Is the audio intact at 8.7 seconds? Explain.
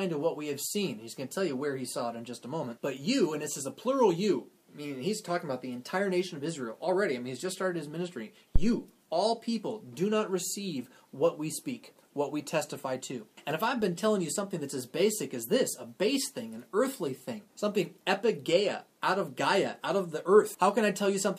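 No. A phantom power thump runs from 8.56 to 8.75 s, so 8.7 s falls inside it. Switching the supply on a live input sends a voltage step through the coupling capacitors, producing a deep thump peaking at about -10 dBFS and decaying in roughly 44 ms.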